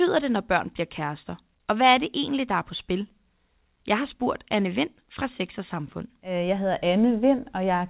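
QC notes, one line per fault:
Nothing to flag here, just speech carried over a call path on G.711 mu-law at 64 kbps, with the sound topping out at 4 kHz as that codec does.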